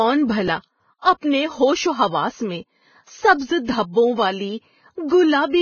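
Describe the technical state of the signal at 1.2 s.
Right around there, from 1.19 to 1.23 s, there's pre-echo: a short hiss smears about 42 ms ahead of an attack, because the codec's quantisation noise spreads across the whole transform block. Underneath it all, the sound is grainy and hissy with nothing above 6.6 kHz, likely heavy Vorbis compression at a low bitrate, something like 16 kbps.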